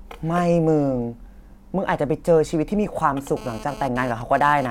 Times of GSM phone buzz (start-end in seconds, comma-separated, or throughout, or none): 3.37-4.66